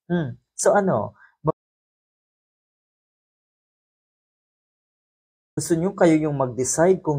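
An audio dropout to silence runs from 1.51 to 5.57 s, about 4.1 s of silence. The input likely disconnected or muted while recording continued, so the sound cuts off abruptly, with no room tone, then resumes.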